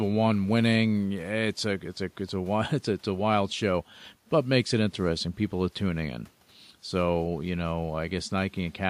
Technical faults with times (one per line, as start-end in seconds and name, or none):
none